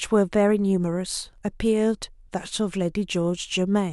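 No technical faults can be heard in the recording.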